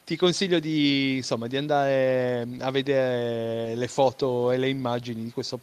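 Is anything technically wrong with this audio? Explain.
No, nothing in this speech recording registers as a technical fault.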